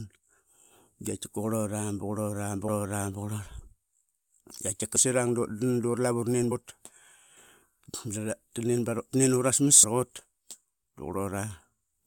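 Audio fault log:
2.67 s, 4.95 s, 6.50 s and 9.82–9.84 s, damaged data in a compressed stream: corrupted bytes in the encoded speech cause the decoder to misread a frame, lose sync and hunt for the next valid frame header. Each time it briefly outputs garbage instead of sound, heard as a short chirp or blip of roughly 12 to 20 ms before normal decoding resumes.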